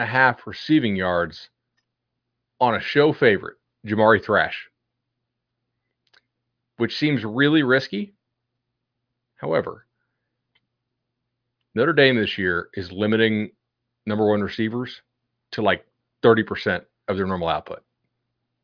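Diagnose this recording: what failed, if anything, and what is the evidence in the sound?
Nothing in the signal chain has failed: the speech holds steady with no breaks, dropouts, level jumps or added noise at any point in the recording.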